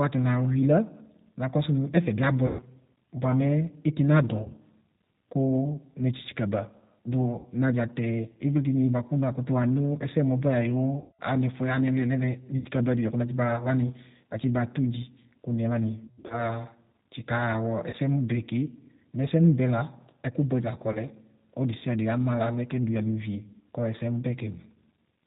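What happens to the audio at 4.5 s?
A short buzzy, stretched smear fading in level runs from about 4.43 to 4.49 s: VoIP packet loss concealed by the speech codec, where roughly 30 ms of missing audio, which fits one lost packet, was filled by extrapolating the last pitch and filter. The surrounding sound is band-limited below 4 kHz and slightly rough and synthetic, the plainly audible mark of the 8 kbit/s G.729 codec.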